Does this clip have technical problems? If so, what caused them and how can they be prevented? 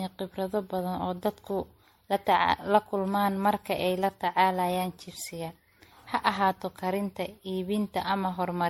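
Yes. Throughout the speech there is generation loss: the audio was likely decoded and re-encoded as MP3 about ten times, each pass requantising on a shifted frame grid. The errors pile up, so the sound turns swirly, hollow and smeared, consonant attacks blur, and nothing remains above 16.5 kHz, which fits a 64 kbit/s MP3 chain. To prevent it, keep a lossless master through every editing stage and encode to a lossy format only once, at the final step.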